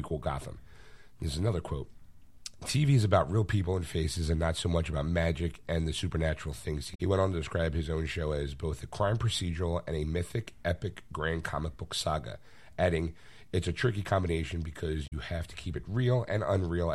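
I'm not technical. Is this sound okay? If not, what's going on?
No. Two short glitches come from damaged data in a compressed stream. Near 6.91 to 7.01 s, after "and the supernatural things", there's a brief glitch. Another comes at 15.04 to 15.13 s, after "a tricky combination". Corrupted bytes confused the player, which lost its place and searched for the next good stretch of data.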